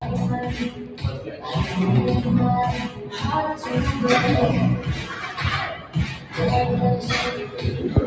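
Throughout, a speech-oriented noise suppressor is acting on non-speech sound. It treats sustained content as noise, so level swings by roughly 10 dB and the sound pumps and thins. The sound is also cut by the noise suppressor at 0.70–1.03 s, 1.24–1.44 s, 2.89–3.13 s, 5.76–5.95 s and 6.16–6.36 s, with dips of about 6 to 7 dB where held or decaying material sinks while onsets survive.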